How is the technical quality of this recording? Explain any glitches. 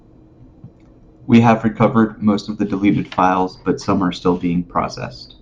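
No audible technical faults.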